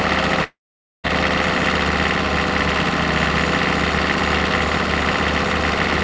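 A recording of everyday sound with a long network dropout from 0.44 to 1.07 s, likely from lost packets: a fading buzz, then about 0.49 s of flat waveform and blank spectrogram, beneath the 8 kHz ceiling of the G.722 call path.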